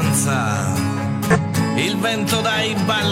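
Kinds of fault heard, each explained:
Damaged data in a compressed stream: a stretch of the encoded bitstream is corrupt, so the decoder reads garbage or rejects those frames, loses its place, and has to scan forward for the next valid frame header before normal decoding resumes. Here that shows up as a short glitch, a chirp, click or brief hole, from about 1.30 to 1.37 s, lasting roughly 60 ms.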